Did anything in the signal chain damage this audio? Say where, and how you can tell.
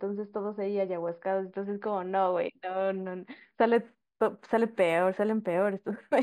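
Yes: imaging from linear upsampling at the rate converter, 11 kHz to 44.1 kHz, from 3.75 s on. A spectrogram shows faint mirrored speech bands from 5.5 kHz, heard as metallic shimmer.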